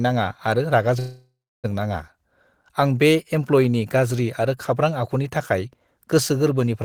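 At 0.99 s the speech stalls in a call audio freeze lasting until 1.66 s. The last sound is stretched into a fading buzz or hiss that decays to near silence, with roughly the final 0.29 s effectively quiet, before the speech resumes exactly where it stopped. Nothing is lost; instead about 0.64 s of delay is inserted. The likely cause is packets held up in transit, letting the jitter buffer run empty.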